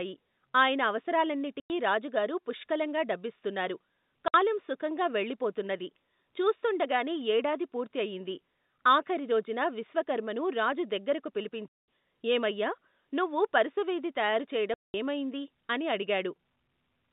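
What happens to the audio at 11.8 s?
Packet loss filled with silence cuts a hole from 11.68 to 11.85 s, between "ఆఖరిరోజున విశ్వకర్మను రాజు దగ్గరకు" and "ఏమయ్యా నువ్వు పరుసవేది తయారు". The gap fits about ten lost 20 ms packets replaced by silence, with hard edges rather than a smoothed or repeated fill.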